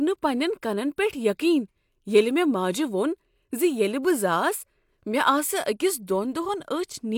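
Nothing goes wrong in this bit of speech: no dropouts, glitches or other technical faults turn up anywhere in it.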